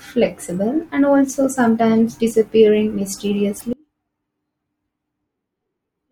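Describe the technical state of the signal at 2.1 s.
At 2.1 s the speech signal is intact, with no audible technical fault at that moment.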